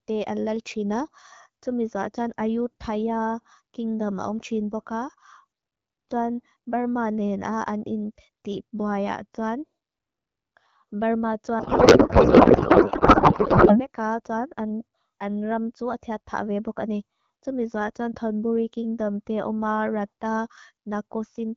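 From 11.59 s to 13.87 s the speech gives way to a codec payload misread: the frames are still decoded as AMR-WB, but with the bit fields taken from the wrong positions, which points to octet-aligned packing being read as bandwidth-efficient. The result is garbled noise and warble that barely tracks the talker and bears no sense of the original speech. Before and after this stretch the AMR-WB coding at 12.65 kbit/s sounds clear, with only light codec colouring.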